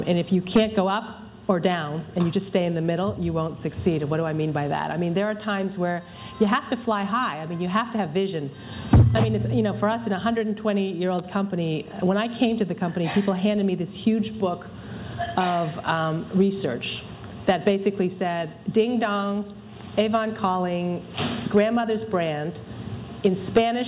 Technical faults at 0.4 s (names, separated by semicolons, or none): none